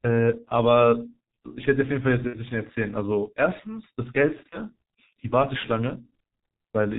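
The speech passes through a G.723.1 codec for its whole length, and the heavy coding damage points to a low rate near 6.3 kbit/s. With nothing above 4 kHz and a slowly updated voice model, the speech sounds muffled and hoarse, with smeared consonants.

VoIP packet loss concealed by the speech codec occurs from 2.27 to 2.38 s and again from 4.51 to 4.60 s. The decoder filled missing packets by extending its last pitch and filter at falling gain. The first gap fits two lost 30 ms frames and the second fits one. Each gap becomes a brief buzzy or noisy, fading smear, and the sound stays weakened just after.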